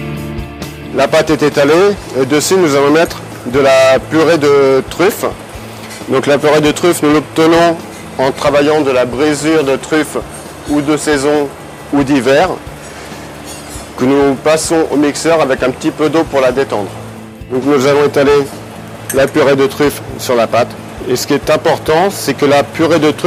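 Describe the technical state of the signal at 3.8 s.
At 3.8 s the signal is intact, with no audible dropout, distortion, glitch or other fault at that moment.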